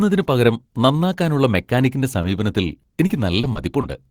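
At 2.21 to 2.25 s a short concealed packet loss smears the speech briefly; the spectrogram shows the last sound continued across the hole before blending back.

From 2.81 to 3.85 s repeated packet loss gives a choppy, robotic sound: around six patched holes, the longest 40 ms, show as repeated smeared spectral stripes and stuttering waveform segments.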